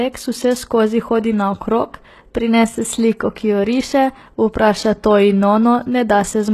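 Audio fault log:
Throughout: HE-AAC compression, likely at a low bitrate such as 16 kbps. The treble up to a hard ceiling near 12.3 kHz sounds rebuilt rather than lost, copied up from lower bands, so s sounds turn gritty and lispy instead of merely dull, as plain low-pass filtering would leave them.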